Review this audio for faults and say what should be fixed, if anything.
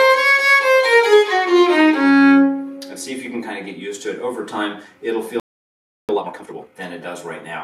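A playback stall cuts the sound to silence from 5.40 to 6.09 s, about 0.69 s, most likely because the player's buffer ran dry or its thread was blocked. Unlike a dropout, nothing is lost: the sound resumes where it stopped. Deeper buffering and a non-blocking audio thread would prevent it.

Time-compressed catch-up follows from 6.09 to 6.77 s: the player clears its backlog by cutting and cross-fading small pieces, so the audio runs at double speed. Pitch stays normal, which separates it from a sped-up resample that would raise the pitch. Preventing the stall removes the need for this catch-up.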